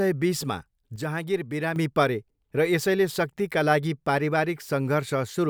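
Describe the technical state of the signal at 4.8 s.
At 4.8 s the speech signal is intact, with no audible fault at that moment.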